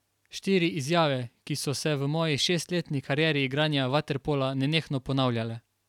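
No technical faults can be heard in this speech recording.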